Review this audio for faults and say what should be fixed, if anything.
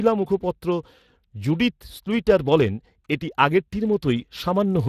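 The speech has a grainy, hoarse texture throughout, with nothing above 15.3 kHz. This is Speex codec damage. The CELP coder has too few bits to model the excitation finely, and the result fits a bitrate around 22 kbps. Prevent it by recording or transferring the audio losslessly, or by using a higher-quality codec setting.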